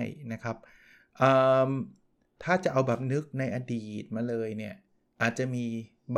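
A speech recording with nothing technically wrong with it.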